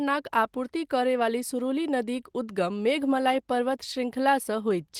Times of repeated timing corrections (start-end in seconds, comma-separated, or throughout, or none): none